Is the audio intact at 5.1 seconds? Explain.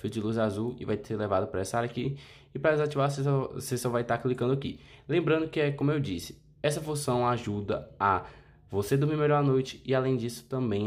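Yes, at 5.1 seconds the audio is intact, with no dropout, click, distortion or other fault audible at that moment.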